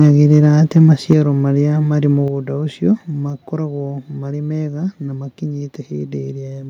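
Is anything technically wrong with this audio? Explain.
Yes. The speech has two related faults: brief distortion from input overload, then two sudden drops in level.

Microphone overload occurs from 0.00 to 0.46 s, again at 0.76 to 0.78 s, and at 1.10 to 1.13 s. The loudest peaks push about 2 dB past the converter's limit, so their tops are flattened. This is likely caused by the microphone input gain being set too high for the converter. The flattened waveform adds a harsh, crackling edge to those syllables. A small share of samples is clipped in the first stretch, and a noticeably larger share in the two short bursts.

The microphone volume is stepped down at 1.13 s by about 4 dB and again at 2.28 s by about 5 dB. The first step follows immediately after the last clipped peak, which points to the call software detecting the overload and cutting the device input gain in a single step. 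Both the speech and the background noise fall in level abruptly at each step rather than fading down.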